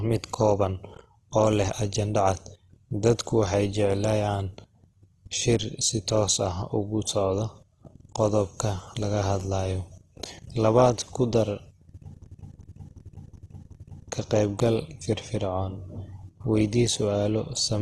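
From the start, the speech has a grainy, rough texture. Nothing is heard above about 12.2 kHz. This likely comes from Opus compression at a low rate, around 16 kbps, in its music mode. That mode keeps each band's energy but fills starved bands with folded or noisy content. The detail turns coarse rather than swirly. The damage is plainly audible for the whole clip.

From 12.26 to 14.12 s, a system hang loop takes over. The system froze while the sound hardware kept replaying its ring buffer. One piece of speech, 372 ms long, repeats exactly five times. That length fits a 16384-sample buffer. The repeats arrive at about 2.7 per second, giving a slow, mechanical stutter. Little or no audio appears to be lost around it.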